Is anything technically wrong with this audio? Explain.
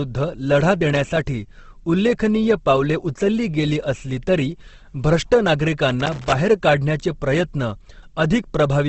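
Yes. There are two problems: a codec-related degradation that runs through the whole recording, and two short bursts of contact noise.

Throughout the clip, the speech has a rough, grainy texture, and there is essentially nothing above 8.2 kHz. This is likely Opus compression in its music-oriented CELT mode at a low rate, possibly around 16 kbps. The encoder preserves the overall energy in each frequency band but cannot spend enough bits on fine detail, so it fills those bands with folded or noise-like content. The result is plainly audible harshness rather than muffled holes. The missing top end reflects the encoder narrowing the bandwidth to wideband.

From 0.90 to 1.17 s, and again from 6.00 to 6.35 s, there is loose connector crackle. Each episode is an irregular burst of scratchy crackling lasting roughly a quarter to a third of a second. A worn or dirty contact is rapidly making and breaking the connection as it shifts. 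This chops the signal on and off, and any DC present on the line turns each make or break into a click.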